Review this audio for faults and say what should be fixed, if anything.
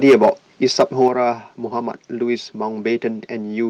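Microphone overload appears from 0.04 to 0.30 s and again from 0.79 to 1.08 s. Peaks are driven about 7 dB past full scale, so their tops are cut off, giving a harsh crackle. In the first stretch roughly a tenth of the samples are clipped, and in the second only a small share. This is likely because the input gain was set too high for the converter. On a waveform the peaks appear flat-topped. A spectrogram shows bright broadband smearing above the harmonics. Lowering the input gain or moving the speaker back from the microphone would leave headroom and prevent it.

Microphone volume stepped down happens at 0.09 s, a drop of about 2 dB, and again at 1.08 s, a drop of about 6 dB. In both places voice and background fall together in one sudden step, right after distorted peaks. The cause is likely the call software's automatic gain control reacting to the overload. The waveform envelope drops abruptly, and the spectrogram dims across all frequencies at once. 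Setting a correct fixed input level, or disabling automatic microphone adjustment, would prevent these steps.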